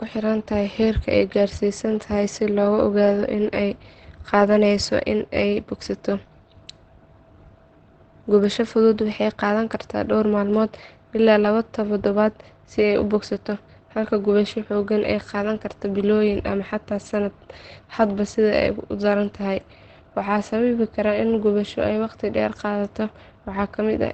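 Throughout the speech, Opus compression is the likely cause of a muffled, hoarse quality with nothing above 8.5 kHz. This fits the codec's speech mode at a low rate near 16 kbps. Unlike MP3, it leaves few swirling spectral holes, just dulled, rough tone.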